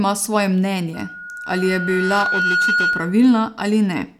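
From 0.93 s to 3.39 s a 1.4 kHz tone swells over about a second and a half to roughly the speech's level: loudspeaker feedback squeal. The microphone picks up its own loudspeaker, and at that pitch the loop gain exceeds one, so the tone feeds itself.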